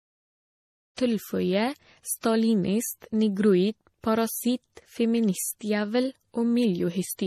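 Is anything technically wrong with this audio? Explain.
Yes. Throughout the speech there is transcoding between lossy codecs: nothing above 14 kHz survives, and the artefacts of one codec are heard together with the different artefacts of a second. That mix of artefacts, rather than one codec's single signature, points to a likely low-rate MP3 re-encoded as AAC-LC. The smooth fade-in ending at about 1.0 s is a clean edit, not a fault.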